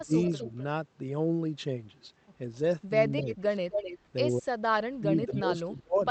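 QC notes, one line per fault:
0.04–0.12 s, 3.21–3.54 s, 4.36–6.04 s: speech suppressed in double talk. The voice ducks while other sound overlaps it: a brief drop of about 25 dB at the start, a shallower dip of about 10 dB near 3.3 s, then dips of up to about 30 dB covering roughly a second. The likely cause is an echo canceller turning down this side's voice along with the loudspeaker echo.
0.23–0.63 s, 3.19–3.35 s, 3.71–3.98 s, 5.25–5.41 s: echo leak. A delayed copy of the voice returns 256 to 261 ms behind the original, about 10 dB down in the first two, as loud as the speech at 3.71 s, and faint, about 25 dB down, at 5.25 s. This is likely a far-end loudspeaker echo the canceller failed to remove.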